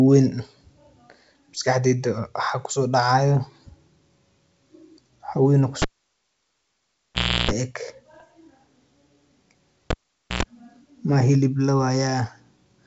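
At 5.82 s a cable is pulled and plugged in. A pop is followed by about 1.6 s of near silence, then roughly 0.34 s of 60 Hz mains buzz as only the tip touches, and a second pop at 7.51 s. That buzz just before the sound returns is what separates it from a plain dropout. From 8.14 to 8.22 s, bit errors on an ADPCM link in the G.722 path produce rough pops with brief level wobbles. Each flipped bit throws off the decoder's step size and predictor, so the disturbance rings on for some milliseconds instead of being a single sharp click. The cable fault recurs from 9.90 to 10.43 s, with about 0.47 s of silence and 0.1 s of buzz. A shorter burst of ADPCM errors follows from 11.04 to 11.10 s.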